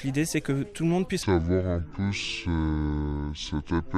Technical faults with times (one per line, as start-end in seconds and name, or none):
1.23-3.98 section at the wrong speed